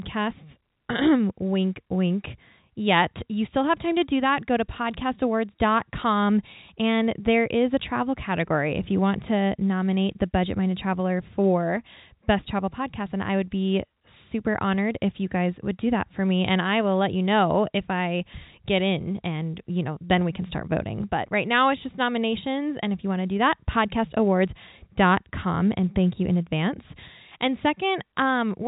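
The speech carries no technical faults, with the band stopping near 3.8 kHz as expected of G.711 telephone coding.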